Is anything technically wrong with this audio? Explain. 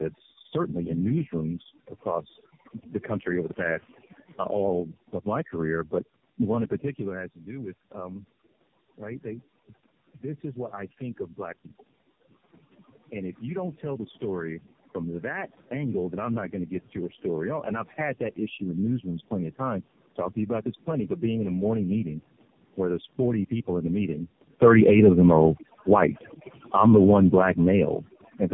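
Yes, there are four faults in this speech clip.

Throughout, overdone noise removal gates frequency bands near the noise estimate, leaving near-silent gaps with twinkling specks, unlike plain low-bitrate coding, which keeps steady background hiss.

Also throughout, tandem speech coding re-encodes already degraded speech at each link. It sounds rough, muffled and warbly, with nothing above 3.8 kHz, which fits repeated narrowband AMR coding rather than one codec pass.

From 13.1 to 23.14 s, automatic gain rising lifts the level about 7 dB gradually. Voice and background swell together, which separates it from the talker's own movements near 7 and 24 s.

From 24.56 to 28.02 s, automatic gain falling lowers the level about 5 dB. The background sinks along with the voice, so it isn't simply a talker moving away.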